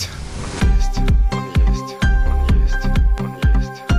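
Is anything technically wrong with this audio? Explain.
Yes, there is one fault, a loud pop.

Loud pop, 3.18 to 3.20 s: a single sharp transient sits on top of the audio and peaks a few decibels above the surrounding sound. The likely cause is a sudden voltage step or pulse entering the signal chain, such as from a plug being connected, a switch, a static discharge or a driver glitch. The following circuitry shapes that pulse into a brief pop, while the audio underneath continues through it.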